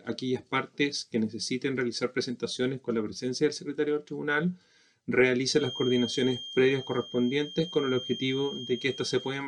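From about 5.47 s to the end of the audio, a thin, steady whistle near 3.2 kHz sits behind the sound, roughly 15 dB below it and swelling and fading slowly in level. This is a feedback whistle, likely caused by a loudspeaker-to-microphone loop hovering just at the edge of feedback: the gain around the loop is high enough to keep that single frequency ringing on, but not high enough for it to run away into a howl.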